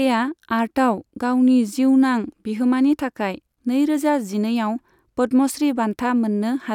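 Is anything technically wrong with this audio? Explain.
No, nothing technically wrong turns up anywhere in this speech recording.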